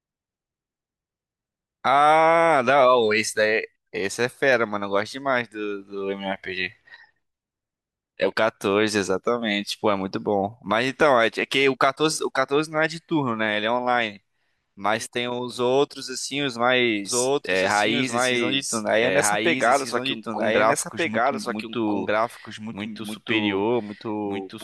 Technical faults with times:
17.05-24.63 doubled audio track

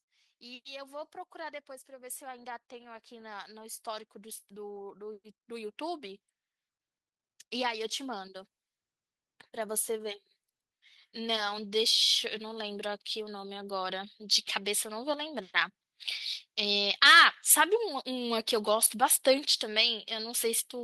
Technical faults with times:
0.40-6.27 automatic gain rising
11.13-15.55 automatic gain rising

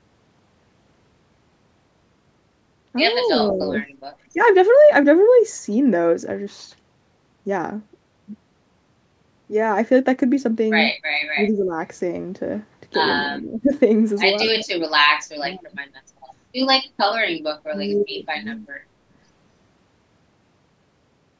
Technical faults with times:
3.19-3.31 echo leak
3.24-3.75 speech suppressed in double talk
4.33-4.40 speech suppressed in double talk
11.35-11.74 speech suppressed in double talk
13.23-13.73 speech suppressed in double talk
14.47-14.70 speech suppressed in double talk
15.41-15.77 speech suppressed in double talk
17.69-18.17 speech suppressed in double talk

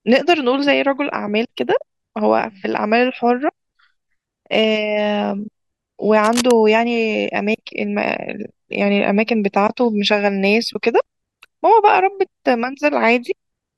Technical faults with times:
6.24-6.51 cable scratch noise

